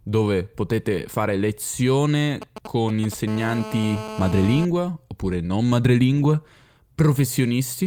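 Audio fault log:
2.42–3.14 s, GSM signalling bursts: a nearby 2G phone is signalling, sending short groups of radio bursts that the audio circuit rectifies into a galloping dit-dit-dit of short 217 Hz buzzes, sitting roughly 10 dB below the speech.
3.28–4.65 s, GSM phone buzz: the phone is now in a call and transmitting bursts 217 times a second. The audio circuit rectifies these radio pulses into a steady, hard, raspy 217 Hz buzz rich in harmonics, unrelated to the speech and about 12 dB below it.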